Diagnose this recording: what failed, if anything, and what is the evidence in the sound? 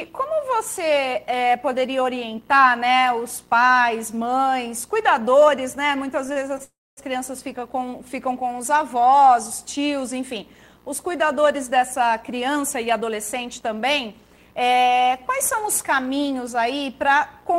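The network and jitter buffer stage failed, with short stalls from late packets. At 6.33–6.38 s and 6.58–6.62 s the sound holds unnaturally, for 31 ms and then 18 ms. The receiver stretched the last audio while it waited. Nothing was lost, but the delay grew each time.

A call audio freeze follows from 6.64 to 6.99 s. The held sound fades, then about 240 ms of that stretch is silence. The audio resumes where it stopped, so 335 ms of gap was inserted. The likely cause is delayed packets that drained the buffer completely.

A jitter buffer speed-up runs from 11.76 to 16.55 s. The sound plays about 6% fast but keeps its pitch, so it feels slightly hurried. The buffer had grown too deep after the freeze. Small pitch-period pieces were cut, about a third of a second in total.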